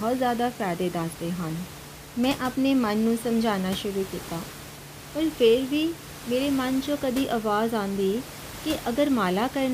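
No technical faults are present.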